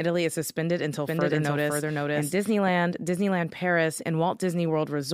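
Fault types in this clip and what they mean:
Doubled audio track: from 1.07 to 2.69 s a second full-band copy runs about half a second behind, roughly as loud as the original, likely from a duplicate capture path; unlike an echo or reverb it never decays, adds no room colour, and starts and stops abruptly.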